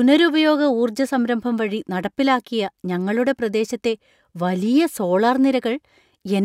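From 4.64 s to the end of the clip, the speech carries a buzz at 50 Hz, the sign of a resampler restarted on every block. The sound appears to have been converted, likely from 48 kHz to 44.1 kHz, in separate 20 ms chunks. Each chunk was processed without the samples on either side, so every boundary gets a small error. On a waveform, tiny discontinuities recur every 20 ms. On a spectrogram, faint vertical lines at that spacing appear only where speech is present.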